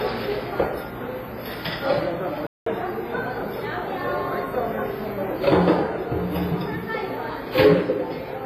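Throughout the clip, a washy, ringing smear and a hiss that breathes with the sound point to WMA compression, likely at a low bitrate near 24 kbps. The smearing is spread over tens of milliseconds rather than warbling.

From 2.47 to 2.66 s the audio halts in mid-flow for about 0.2 s, then continues. That clean, sustained silence, rather than a brief click or gap, is likely a playback stall.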